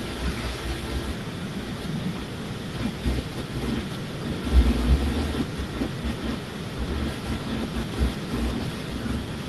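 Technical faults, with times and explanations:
Nothing stood out on listening to this speech recording.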